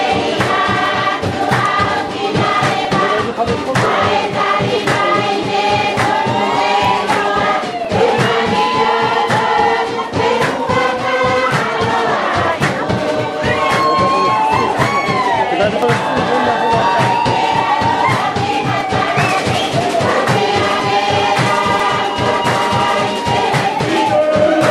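Regular small ticks sound about once per second from 0.86 s to 23.79 s, heard only where there is signal. These are periodic USB or driver dropouts: something blocks the audio path at a fixed interval, and each time around 2 ms is skipped outright.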